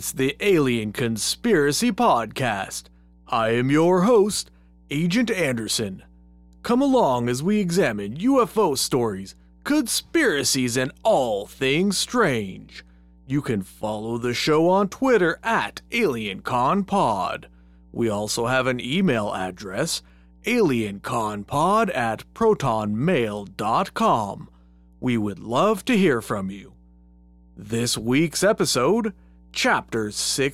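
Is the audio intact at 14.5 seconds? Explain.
No. Mains hum runs under the speech at 14.5 seconds, as it does for the whole clip. Power-line interference, likely from a ground loop or nearby transformer, adds a steady 60 Hz tone with low harmonics. It sits about 30 dB below the speech.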